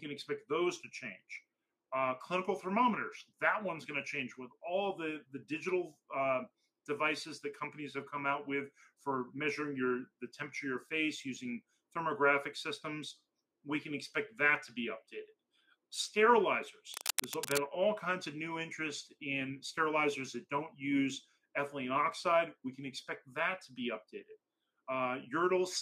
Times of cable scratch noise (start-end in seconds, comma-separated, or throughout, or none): 16.94-17.59